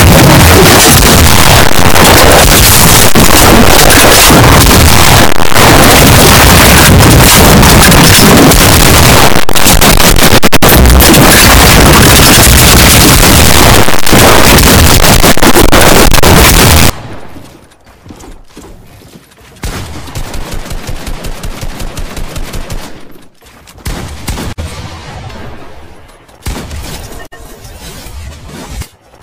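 From the start to 16.9 s the audio breaks into loud, harsh distortion, with soft passages as loud as strong ones. This is likely signed and unsigned samples mixed up in 16-bit data: the top bit flips, so every zero crossing jumps across the full range.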